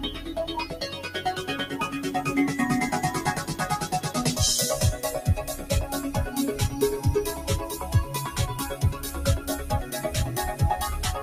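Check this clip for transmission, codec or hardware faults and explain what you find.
There's one real problem here: a noise suppressor was applied to this sound even though it's built for speech, and it's working against the clip the whole way through. It treats sustained tones, ambience and tails as noise and ducks them, while sharper onsets get through. Level swings by around 10 dB as it clamps down and lets go, so the audio pumps and flutters, and decays get thinned out instead of ringing naturally.

The two sharpest spots are where the sound gets cut by the noise suppressor, both right at the start. From 0.09 to 0.32 s the suppressor pulls the level down by up to about 8 dB, and again from 0.65 to 1.19 s by up to about 6 dB, with the dip covering most of that second stretch. In both places it seems to have decided the steady part was noise, so the body of the sound sinks and its tail gets chopped short instead of fading out.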